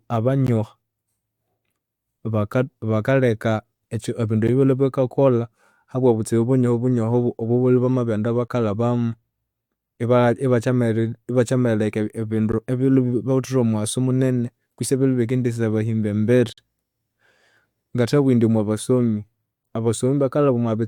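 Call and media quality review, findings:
Gap between stream segments in the speech: short hard-edged dropouts to silence at 0.47 s, 4.48 s, 8.48–8.50 s, 12.52 s and 16.53–16.58 s, about 11 to 49 ms each, longest at 16.53. Regular 4 s spacing points at segment boundaries in the player or packager. Timestamps leave a small hole between segments and the player pads it with silence. Nothing's actually missing, just dead air inserted.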